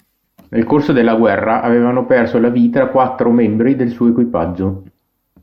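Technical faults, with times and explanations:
0.00–3.80 s, channel delay (comb filtering): one channel is lagging the other by a tiny amount, around a fiftieth of a millisecond, which fits a one-sample offset, and the pair is being summed to mono. With a gap that small the first cancellation notch sits up near 20 kHz, so instead of an obvious phasey hollowness you get the top end gently sagging and the speech sounding a touch dull until it clears just before 3.8 s.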